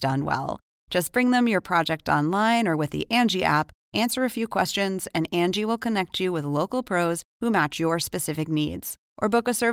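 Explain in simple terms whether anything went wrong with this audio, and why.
Listening to the speech in this recording, nothing stood out as having gone wrong.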